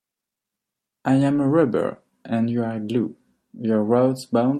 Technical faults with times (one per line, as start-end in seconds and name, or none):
none